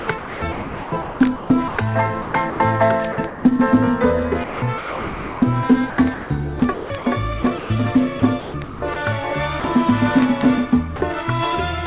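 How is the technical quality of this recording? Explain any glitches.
The recording is choppy in places, and the whole band stops at 4 kHz, which fits a G.711 telephone call path.

Sound chopped by the voice detector occurs from 0 to 2.6 s, 3.12 to 3.44 s, and 4.44 to 8.96 s, with roughly 1.36 s, 0.22 s and 1.82 s of it swapped for comfort noise. The likely cause is the sender's detector repeatedly toggling transmission. On a spectrogram, detailed energy alternates with flat, featureless noise bands. On a waveform, envelopes are cut off abruptly.

Sound dropped by the voice detector occurs at 9.6 to 9.64 s (40 ms) and 10.96 to 11.02 s (60 ms). The detector likely judged the quiet sound to be background and stopped sending, so brief steady noise fills the gap. On a spectrogram, these show as thin vertical slots of uniform noise. On a waveform, they appear as short, flat, low-level stretches.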